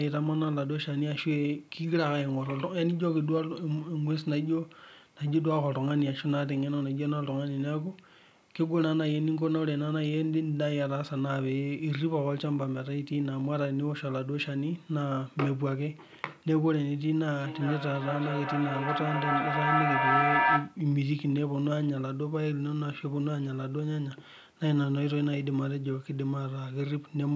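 From 17.31 to 20.83 s there is feedback echo between two devices: a second device on the call replays the audio into a nearby microphone, so the speech returns roughly every 0.4 s, thinner and ringing, building to about 4 dB above the direct speech instead of decaying.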